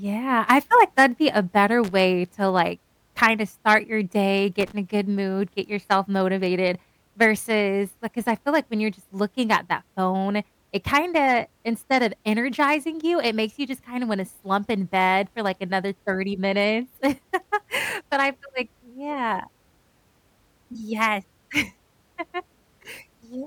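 Loose connector crackle breaks into the speech twice, from 1.84 to 1.91 s, between "that'd be a better" and "to like kinda start", and from 4.60 to 4.72 s, after "kinda start your day". A worn or dirty contact rapidly makes and breaks, chopping the signal into a short, irregular scratch and crackle.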